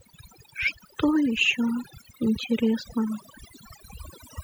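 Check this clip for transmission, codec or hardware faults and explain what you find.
Overdone noise removal runs throughout the speech, from start to finish. A noise reducer set far too aggressively is pulling down or switching off individual frequency bands whenever their level sits close to its noise estimate. The quieter parts of the voice fall below that threshold and vanish along with the noise. Between phrases the background collapses to near silence sprinkled with twinkling specks.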